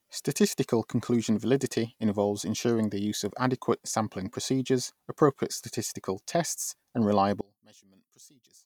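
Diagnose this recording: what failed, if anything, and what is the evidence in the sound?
From 7.41 s to 8.65 s the speech falls by about 28 dB and turns faint, with the centred voice almost gone. This is one channel inverted: with one side's polarity reversed, everything common to left and right cancels when the pair is summed to mono, leaving only their small difference. The likely cause is a polarity swap in the analogue wiring, such as reversed conductors on one leg.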